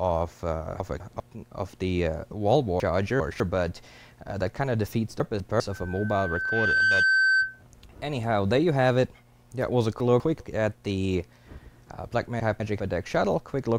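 The audio has chunks out of order in five places: 200 ms blocks were written late and play after the blocks meant to follow them. At 0.8–1.2 s, 5.2–5.6 s, 10.0–10.4 s and 12.4–12.8 s one chunk is displaced by one position, and at 2.8–3.4 s by two, so each spot sounds jumbled. From 5.71 to 7.63 s a loudspeaker feedback squeal appears, as a microphone picks up the speaker it feeds and the loop gain passes unity at 1.5 kHz. That single tone swells over about a second into a squeal that ends up about 5 dB louder than the rest of the audio.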